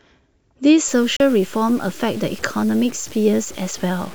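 From 0.88 s to the end, the speech turns grainy, distortion tracking the signal about 25 dB down, likely low bit depth without dither (around 6-bit truncation); waveforms show staircase steps. At 1.16 to 1.20 s, a digital broadcast dropout mutes about 32 ms with a 3 ms fade, consistent with one lost frame: a flat waveform gap and a blank spectrogram column.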